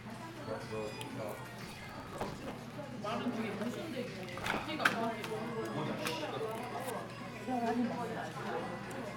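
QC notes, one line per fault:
1.66–2.52 s and 4.41–4.66 s, processor overload crackle: the processing repeatedly missed its buffer deadlines, and each missed block was skipped outright. The gaps are spaced at intervals that fit buffers of about 5 ms, and their abrupt edges produce a gritty tearing that sits on the sound. On a waveform this shows as many tiny dropouts with sharp steps. On a spectrogram it shows as dense vertical broadband streaks, longer in the first burst.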